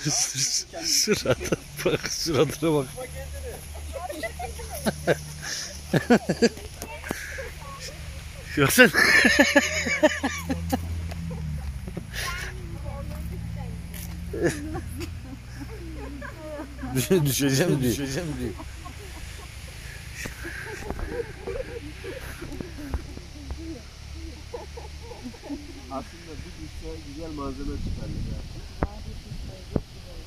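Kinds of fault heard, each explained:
Doubled audio track, 16.32 to 25.38 s: a second, full-band copy of the sound runs about half a second behind the original and roughly 5 dB quieter, so every event is heard twice. The copy has no decay or room colour, unlike a natural echo, and it switches on and off abruptly at those times. The likely cause is the same signal reaching the mix twice, through a second, slower capture path or two edited copies left out of step.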